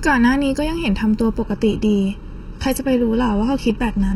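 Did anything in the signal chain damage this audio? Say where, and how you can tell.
Yes, two problems. The first is a channel delay with comb filtering, and it runs the whole clip. The speech sounds hollow and phasey, with a fixed notch around 700 Hz and more repeating up the spectrum. That spacing means one channel arrives just under a millisecond late, which fits a lag of a few dozen samples in a driver or buffer. When the two channels get summed to mono, whatever they share cancels at those evenly spaced frequencies.

The second is the adaptive stream dropping to a lower bitrate. At 1.42 s the quality falls off a cliff, with no gap. The top end disappears, and above 14.4 kHz there's nothing at all. Codec artefacts climb until the end of the clip. That sound points to a switch from a clean AAC-LC rendition at something like 96 kbit/s to HE-AAC at around 16 kbit/s when the network connection slowed.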